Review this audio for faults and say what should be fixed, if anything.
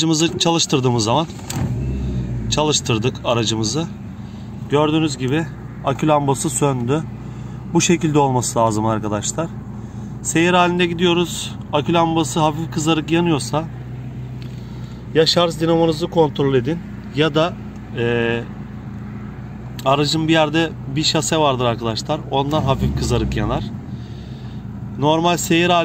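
Nothing stood out on listening, so there is nothing here that needs fixing.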